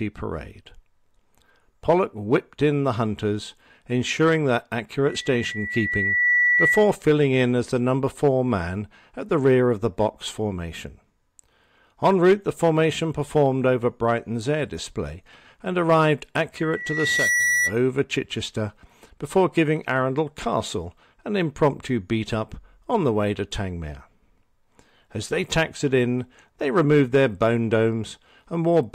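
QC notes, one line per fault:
5.05 to 6.96 s, loudspeaker feedback squeal: a steady 2 kHz tone creeps in over the speech and swells for about a second and a half before it peaks, ending up roughly 5 dB above the talker. The mic is hearing its own loudspeaker, and at 2 kHz the loop gain tops unity, so that one frequency keeps feeding itself until the loop gets broken.
16.57 to 17.76 s, loudspeaker feedback squeal: same 2 kHz ring comes back, this time climbing faster, in well under a second, and topping out at about the level of the speech. Same loop, same frequency, so it's the same path tipping back over unity gain.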